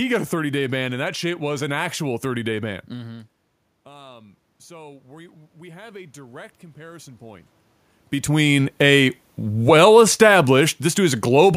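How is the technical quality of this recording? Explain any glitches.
The recording has one clear glitch, automatic gain rising, between 2.90 and 7.52 s, after "day ban" and before "between a well".

Around 3 s the talker moves back and the input drops by about 21 dB. The automatic gain control reads this as too quiet and slowly raises its gain by about 8 dB. Voice and room noise swell together. On a waveform the envelope, including the noise floor between phrases, climbs gradually. On a spectrogram the background band brightens across the whole interval until the talker moves again near 7.5 s.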